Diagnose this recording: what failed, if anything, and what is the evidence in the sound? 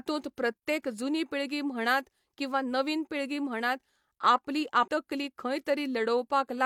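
Failure at the codec stage: compressed frames skipped. Just after "नवीन पिळगी म्हणात आपली", at 4.83 to 4.88 s, the speech jumps forward. Roughly 0.3 s of audio never plays. The decoder dropped a run of about seven whole frames, missing or rejected as damaged. The jump size fits frames of about 46 ms each.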